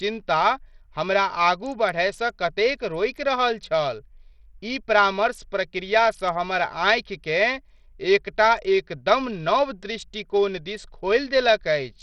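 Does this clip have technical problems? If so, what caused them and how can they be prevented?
Yes. Throughout, the treble flickers and drops out under gritty noise, likely Bluetooth SBC compression at a starved bit pool, consistent with roughly 64 kbps. Prevent it by raising the SBC bit pool or using a higher-quality codec link.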